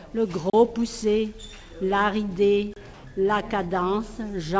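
At 0.50 to 0.53 s and again at 2.74 to 2.76 s there is a block of digital silence, about 35 ms and 28 ms long. The output buffer was likely not filled in time, so the sound drops out and returns with no fade, leaving a short hole.

From 2.94 to 3.04 s, the quiet background, which sits about 24 dB below the loudest parts, turns into a steady, featureless hiss for 100 ms and shifts by about 1 dB in level. This is likely comfort noise in place of the background: the sender stops transmitting during the pause and the receiver fills it with synthetic noise. Across the clip, nothing is present above 8 kHz, as expected from the G.722 call path.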